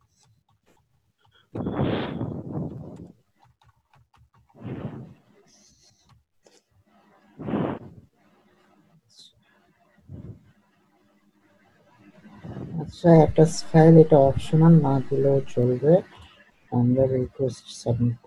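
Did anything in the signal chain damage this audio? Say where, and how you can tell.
Yes. A DC step sits at the converter stage: at 13.15 s the waveform's zero line jumps by about -32 dBFS and holds until 15.63 s, where it steps back. Each transition is heard as a low thump, while the sound itself carries on unchanged between them. That behaviour fits an offset being switched into the input or the converter recalibrating, shifting the baseline for roughly two and a half seconds before it returns.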